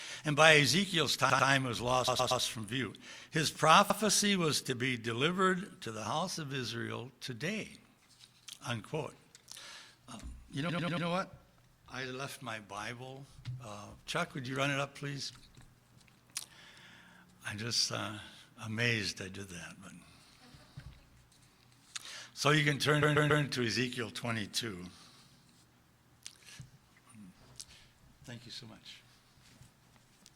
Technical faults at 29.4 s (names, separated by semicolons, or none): none